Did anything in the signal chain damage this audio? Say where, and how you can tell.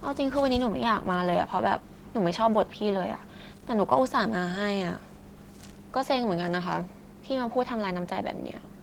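Yes. The damage is at the codec stage, and it runs through the whole speech clip. This is Opus voice compression. The band still reaches about 20.1 kHz, so the encoder did not narrow it. The harm is in the coding itself. The speech sounds hoarse and slightly robotic. The texture suggests hybrid mode, with SILK coding the low band and a CELT layer above 8 kHz. The coarseness fits a rate near 16 kbps, too low for clean fullband speech.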